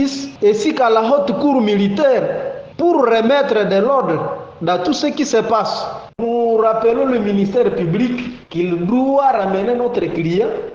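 The audio drops suddenly in quality at 6.14 s and stays degraded to the end, with no gap. This is an adaptive stream at a lower bitrate. Artefacts rise, which fits a step down from about 64 to 16 kbit/s Opus.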